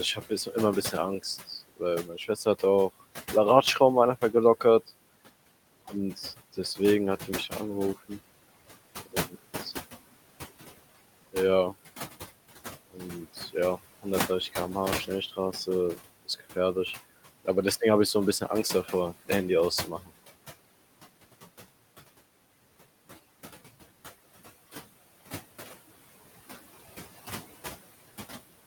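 Speech with noise suppressor artifacts throughout: the suppressor pulls steady background down by about 16 dB, so the residual noise pumps between phrases and can warble. Speech cut by the noise suppressor occurs at 0.15–0.55 s, 2.03–2.62 s just before "auch la", and 12.91–13.01 s, where quiet sounds were treated as noise and dropped by up to about 16 dB, leaving them faint.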